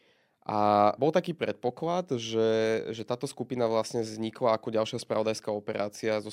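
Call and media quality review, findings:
Two sharp single clicks, at 3.00 s just before "táto skupina vlastne vznikla" and at 5.14 s after "vlastne vznikla ako ďalšia". Likely dropped samples: a fraction of a millisecond missing, so the waveform steps abruptly. Thin vertical spectral lines.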